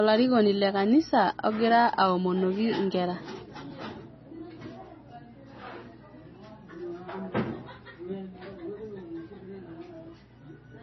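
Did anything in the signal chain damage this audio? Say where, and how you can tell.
Yes. A steady 60 Hz mains hum runs throughout the speech, about 30 dB below it. That points to a ground loop or transformer coupling in the analogue wiring.

The codec stage also damaged it. Nothing remains above 5.9 kHz, and the sound is watery and swirly. This is likely heavy MP3 compression at a bitrate near 24 kbps.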